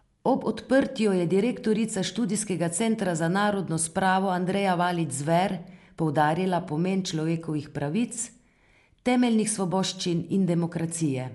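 Right through the speech there's plainly audible Dolby Digital compression damage, likely from a low bitrate around 64 kbps: nothing above 11.4 kHz, a dull top, rough fluttering noise.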